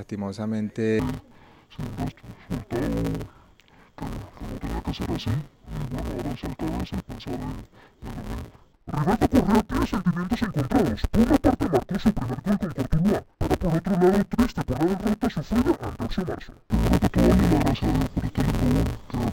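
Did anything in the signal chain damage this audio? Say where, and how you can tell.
Yes. From 0.99 s to the end, the audio turns dull and robotic, with a steady buzz at about 172 Hz and no clear drop in pitch. This points to a driver or buffer stage treating interleaved audio as planar. Each block of alternating left and right samples is split down the middle, so every half is played at half speed. A repeat rate of 172 Hz and a 5.8 ms block fit a 256-sample buffer.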